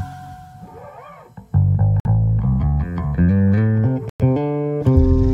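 At 2.00 s the sound drops to silence for 52 ms, then again at 4.09 s for 104 ms. Each is likely a Bluetooth stall: delayed packets emptied the receiver's buffer.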